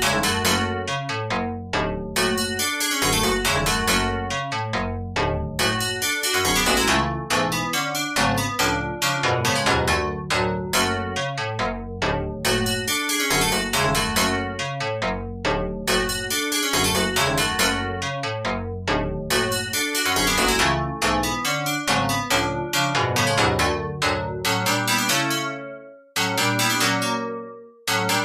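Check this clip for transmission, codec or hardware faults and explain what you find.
Nothing in the clip points to a transmission, codec or hardware problem; the signal path gives no audible sign of trouble anywhere.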